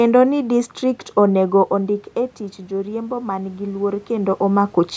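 It's a speech clip, and right after "ni distrikt onego" there's automatic gain rising: the talker drops about 10 dB around 1.5 s, so the gain control slowly lifts by about 4 dB from 1.73 to 4.4 s, swelling voice and room noise together.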